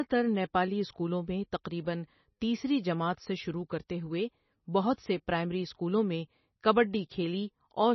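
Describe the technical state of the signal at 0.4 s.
At 0.4 s the speech carries heavy MP3 compression damage, present throughout the clip and most likely caused by MP3 encoding at a bitrate around 24 kbps. Nothing reaches above about 5.9 kHz, where the encoder cut the treble. Weak frequency lines drop in and out between frames, giving a watery, swirling texture with metallic chirps on s sounds and smeared attacks. That flickering is what sets it apart from a simple low-pass filter, which would sound dull but steady.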